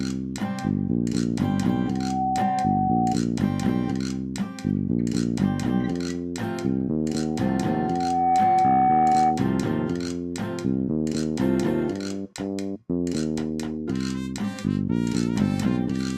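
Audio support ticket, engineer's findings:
Loudspeaker feedback squeal, 1.85 to 3.20 s. Single tone at 751 Hz swells in under half a second, sits about 5 dB above the programme. Mic picking up its own loudspeaker; loop gain above unity at that frequency.

Same squeal again, 7.10 to 9.55 s, same 751 Hz. Slower build, roughly a second and a half, similar level. Same loop recurring. Check mic placement and speaker aim, and notch 751 Hz.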